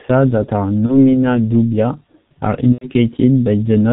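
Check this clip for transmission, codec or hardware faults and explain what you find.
Two faults are present: heavy coding damage from the G.723.1 codec throughout the speech, and a burst of VoIP packet loss concealed by the speech codec near the end.

Throughout the clip, the G.723.1 codec does heavy damage. Its coarse 30 ms frames and slow voice model leave the speech muffled and hoarse with smeared consonants, which fits a 6.3 kbit/s stream. On a spectrogram, energy stops sharply at 4 kHz and the harmonics look blotchy.

From 2.72 to 2.87 s, just after "dubia are", there is VoIP packet loss concealed by the speech codec. About 90 ms of audio is missing, which fits three lost 30 ms frames. The decoder extends its last pitch and filter with falling gain, producing a buzzy tone or coloured noise that fades. The waveform shows a decaying envelope.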